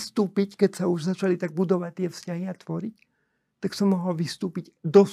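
Speech recording with no audible technical faults.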